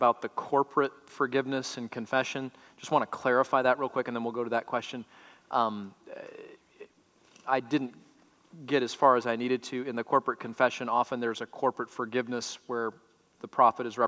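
No technical faults are audible anywhere in the audio.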